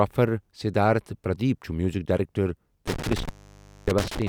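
At 2.87 s the speech hits an intermittent contact. A loose connection opens for about 0.59 s, cutting the sound with crackle and leaving faint hiss.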